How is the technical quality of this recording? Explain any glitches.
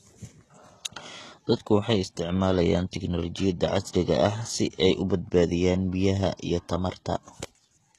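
The recording has plainly audible coding damage from start to finish. Its treble is bright but synthetic, and nothing reaches above 12.3 kHz. The sound is likely HE-AAC compression at a rate that fits about 16 kbps. Only the lower band is truly coded. The highs are copied upward from it and shaped coarsely, so their harmonics don't align. Sibilants turn gritty and metallic instead of simply dull, which separates this from a plain low-pass or muffled MP3.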